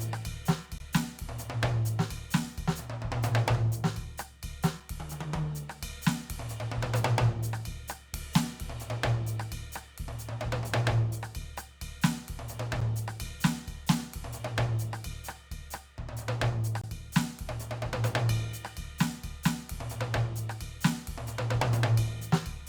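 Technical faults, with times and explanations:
0.78, 12.81 and 16.81–16.84 s: gap between stream segments. The time stamps of adjacent 4-second segments leave a small hole that the player fills with silence, so the music drops out abruptly for about 18, 9 and 23 ms with hard edges. No audio is lost.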